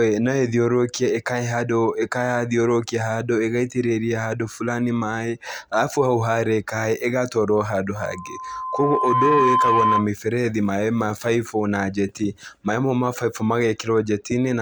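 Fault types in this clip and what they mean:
Loudspeaker feedback squeal: A microphone is picking up its own loudspeaker, and the loop gain tops one at 1 kHz. From 7.95 s a pure 1 kHz tone swells over about a second and a half. It peaks roughly 5 dB above the speech and stops at 10.10 s.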